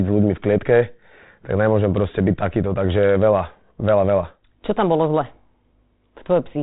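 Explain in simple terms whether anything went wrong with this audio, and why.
Nothing stood out on listening; the speech comes through with its ordinary phone-line sound and no glitches, dropouts or other problems anywhere.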